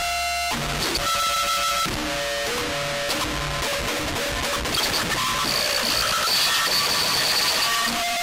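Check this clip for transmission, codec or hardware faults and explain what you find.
No transmission, codec or hardware faults are audible anywhere in the recording.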